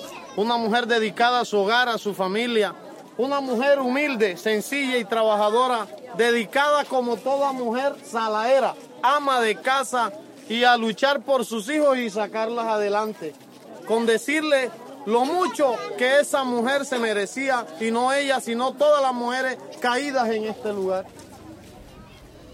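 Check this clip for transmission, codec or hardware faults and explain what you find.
Nothing stood out on listening to this clip.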